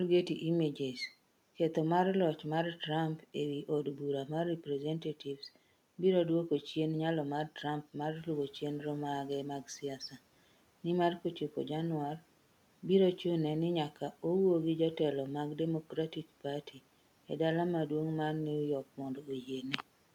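Between 15.85 and 16.45 s, parts of the speech sound swallowed: soft consonants and word endings dip away and turn faint, falling by as much as about 12 dB, for something like a hundred and fifty milliseconds in total across that stretch. This is speech cut by the noise suppressor, which mistook those quiet speech sounds for noise and turned them down along with the room noise that rises around 8 s and sits about 28 dB below the voice.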